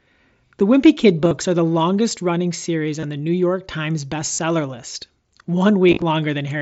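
Speech, carried over a wideband mSBC headset link whose light graininess stays in the background. It has concealed Bluetooth headset packet loss at 1.22–1.31 s, 3.00–3.03 s, 4.33–4.39 s and 5.89–6.02 s. Dropped packets were filled by repeating recent waveform. The result is brief buzzy, held-tone patches with a slight warble as real speech resumes.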